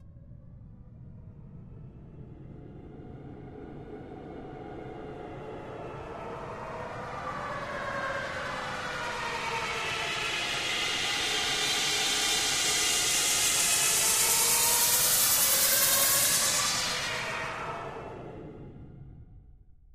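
Listening through this recording of sounds, nothing stood out as a technical problem.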